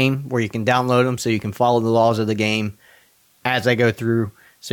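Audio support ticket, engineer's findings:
Low bit depth with dither, whole clip: steady even hiss under the speech, about 40 dB down, no distortion. Dithered rounding to roughly 9 bits, so the error is flat white noise.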